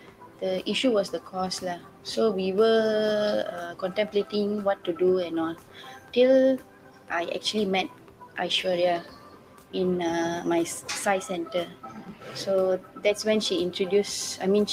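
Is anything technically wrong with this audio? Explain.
Yes. A noise suppressor meant for speech has been applied to this sound. It runs for the whole clip. It treats steady and sustained parts as noise and lowers them, while sharp onsets pass. The result is a level that swings by around 10 dB. Held parts sink and fade-outs get clipped short, so the sound pumps and thins rather than sitting at an even level.

There are seven clear cases of sound cut by the noise suppressor. They fall at 0.00–0.43 s, 1.15–2.06 s, 3.72–4.94 s, 5.54–7.11 s, 7.88–8.37 s, 9.01–9.75 s and 11.46–13.05 s. In each, the level drops by up to about 10 dB. Within each span, the ducking lasts from under half a second to about a second. Sustained material dips and its tail is cut off early.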